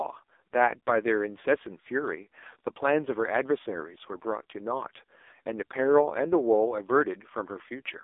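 From start to finish the speech has been through an AMR narrowband mobile codec, the old 2G/3G phone codec. Everything sits in a narrow line band of roughly 300 Hz to 3.6 kHz, with nothing at all above 3.7 kHz, so the voice sounds boxed-in and thin. The damage is heavy: a buzzy, synthetic edge where the vocal-tract model is fed too few pulses, which fits one of the low modes around 5.9 kbps.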